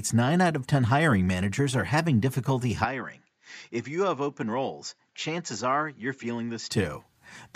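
From 2.84 s to 6.72 s the input likely switched to a poorer device: the speech abruptly loses everything above 7.6 kHz, drops roughly 10 dB, and gains faint new background noise, turning duller without any gap at the switch.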